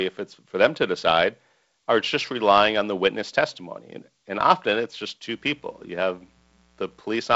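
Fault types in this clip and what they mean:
Mains buzz: a raspy buzz from 5.29 to 7.01 s, roughly 40 dB under the speech. Spikes twice per 60 Hz cycle push harmonics up into the kilohertz range, making it gritty rather than the smooth low tone of plain hum.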